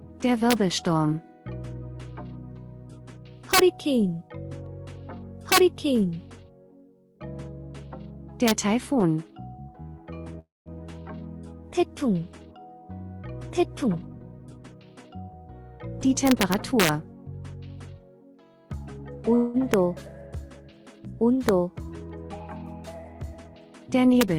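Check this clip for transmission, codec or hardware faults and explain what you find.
Three kinds of fault are present: integer overflow, call audio freeze and jitter buffer speed-up.

Integer overflow occurs at 0.51–0.53 s, 3.54–3.59 s, 5.52–5.58 s, 8.48–8.51 s, 16.27–16.89 s, 19.74 s, 21.49 s and 24.21 s. A gain or mixing stage pushed loud peaks past the largest integer value, by about 1 dB at most of these points and about 6 dB at 3.54 s and 5.52 s. Instead of being held at the limit, those samples wrapped to the opposite sign. Each one jumps across the full range, producing harsh cracks far sharper than ordinary clipping. The longest run of them is at 16.27–16.89 s.

Call audio freeze occurs at 10.39–10.69 s and 19.35–19.57 s. The likely cause is that packets stalled in transit and the jitter buffer ran dry, so the receiver extended the last sound to fill the wait. The first gap lasts 264 ms, and its fill fades to silence for 190 ms. 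The second lasts 188 ms and is bridged by a fading fill without going silent. In both cases the audio then resumes from where it stopped, with nothing lost but the timing shifted later.

Jitter buffer speed-up runs from 13.84 to 15.34 s. The buffer held more audio than its target. To shed that excess delay, the receiver repeatedly cut out short pitch-period slices, removing about 0.3 s in total. The audio plays at 118% speed with its pitch unchanged, so this stretch sounds noticeably hurried and rushed compared with the rest of the clip.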